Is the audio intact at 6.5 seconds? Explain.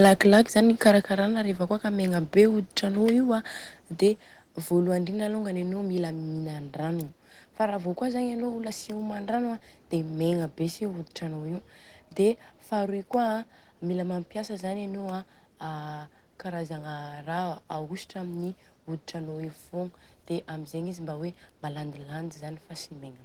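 Yes, the speech at 6.5 seconds is intact, with no dropout, click, distortion or other fault audible at that moment.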